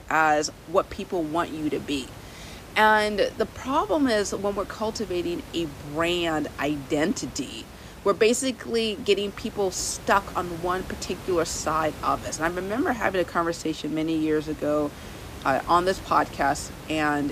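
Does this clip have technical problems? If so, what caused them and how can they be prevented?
No, this clip has no technical problems, so there is nothing to prevent.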